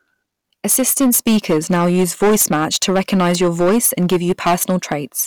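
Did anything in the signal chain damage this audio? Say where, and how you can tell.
Yes. Hard clipping runs through the whole speech clip: every loud syllable carries a harsh, buzzy fuzz. The level was driven about 13 dB past what a converter or fixed-point format stage could pass, so around a tenth of samples hit the ceiling and were cut flat.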